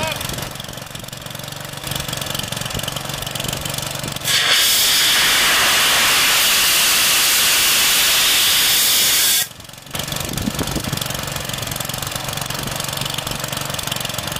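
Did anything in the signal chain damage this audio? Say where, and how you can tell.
Yes. Damaged data in a compressed stream shows up at the codec and storage stage. There are two brief disruptions, at 1.84 s and 6.39 s. Each is momentary and breaks the flow of the audio abruptly. Part of the compressed data was wrong there. The decoder could not read those frames correctly and lost sync. It then searched for the next valid frame header and resumed from that point.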